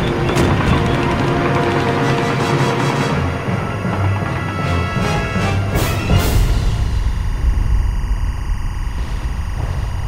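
Timecode bleed runs from start to finish: linear timecode from an adjacent track or cable has leaked in, its square wave flipping between roughly 1 and 2 kHz. It sits about 20 dB under the sound as a steady chirping warble, pacing consistent with 24-frame code.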